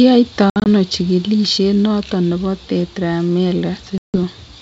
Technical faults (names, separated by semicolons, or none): packet loss on an ADPCM call